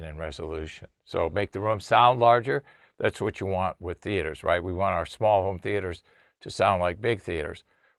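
Between 0.64 and 2.25 s the audio turns rough and coarse. This is a call bitrate drop, consistent with the encoder falling from roughly 32 to 18 kbps for about 1.55 s.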